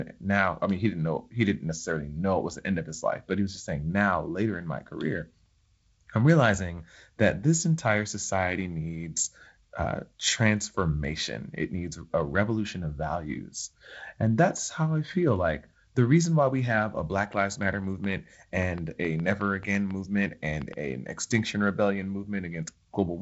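From 17.19 to 20.74 s, right after "why we have a", a train of clicks ticks irregularly about four times a second, roughly fifteen sharp pulses peaking about 5 dB above the speech. Likely interference or a struggling interface. They appear as thin vertical lines across the spectrogram, which stops near 7.7 kHz from the G.722 coding, and as narrow spikes on the waveform.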